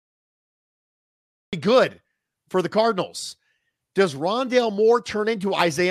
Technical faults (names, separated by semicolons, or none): cut-off start